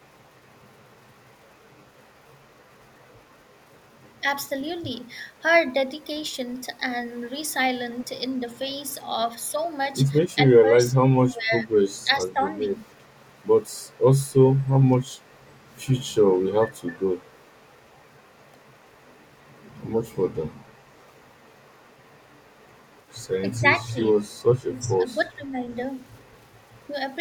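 The speech dips six times, at 8.03–8.1 s, 10.43–11.71 s, 12.04–12.66 s, 14.91–14.96 s, 23.58–23.98 s and 24.68–25.55 s, by about 10 dB and by about 15 dB in the second and third stretches. This is likely speech suppressed in double talk, where an echo canceller mistakes the talker for loudspeaker echo and attenuates both. Unlike packet-loss dropouts, the voice is turned down in patches.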